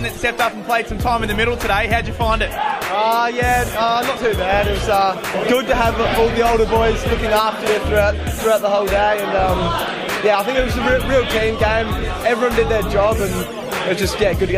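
A train of clicks runs from 3.68 to 5.10 s: about twenty near-identical pulses at a regular 14.2 per second, roughly as loud as the audio itself. The steady spacing and matching shape set it apart from random crackle, and likely point to interference or a faulty connection or power supply.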